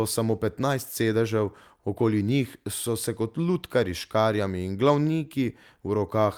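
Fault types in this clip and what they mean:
Clock drift between sender and receiver: The sending side's audio clock runs roughly a percent slow compared with the receiver's, so samples arrive a little short of what playback needs. The jitter buffer slowly drains, and the receiver has to fill in now and then to avoid running dry. It doesn't crackle. It just sounds like a faint, uneven unsteadiness running under the speech for the whole clip.
Repeated timing corrections: To keep up with that slow sender, the receiver keeps repeating tiny slivers of audio from about 1.04 s to 5.99 s. Every edit stretches things the same way, and together they add around 70 ms, so playback runs at 99% speed over that stretch. The spacing between edits is irregular, so what comes through is at most slight hiccups or an unsteady tempo rather than a steady slowdown.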